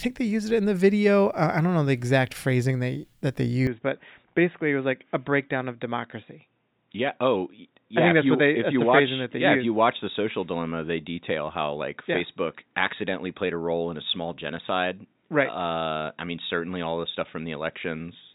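At 3.67 s, right after "phrasing they that they", the speech turns dull and boxy with no gap, and stays that way to the end. Nothing above about 3.8 kHz survives, the level drops by about 5 dB, and a new faint noise floor appears, roughly 50 dB down. The likely cause is an input switched to a poorer device. A simple filter would narrow the band, but it wouldn't also bring a new level and a new background noise.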